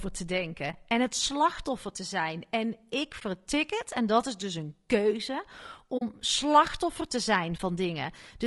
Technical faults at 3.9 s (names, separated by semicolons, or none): low-delay AAC compression